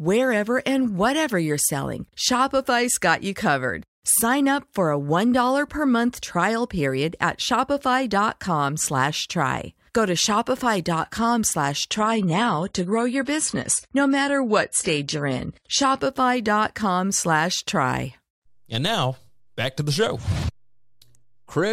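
From 11.96 s to 15.96 s the speech abruptly loses quality without any gap, the signature of an adaptive stream at a lower bitrate. The player appears to have switched to a lower-rate rendition when the connection slowed, which fits a drop from about 96 kbit/s to 32 kbit/s in the same AAC codec. Nothing above 11.5 kHz survives in that stretch, the top end turns dull, and coding artefacts become audible until full quality snaps back.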